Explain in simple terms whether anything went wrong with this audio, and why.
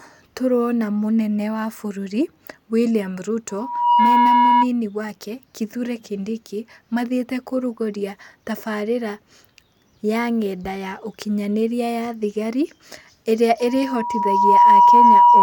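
Loudspeaker feedback squeal occurs twice: 3.49 to 4.68 s, and 13.59 s to the end. The microphone picks up its own loudspeaker, so a 965 Hz tone keeps looping and growing, rising well above the speech within about half a second, then a second.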